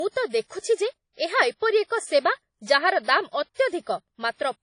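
Throughout the speech there is nothing above 10.1 kHz, so the top octave is missing and sibilants sound dull. The file is a high-bitrate MP3, but the sound points to low-bitrate audio saved at a high bitrate. The likely cause is a source from a low-bitrate codec such as WMA, around 32 kbit/s, that was later re-encoded. The second encoding keeps the earlier cut-off and artefacts and cannot restore what was discarded.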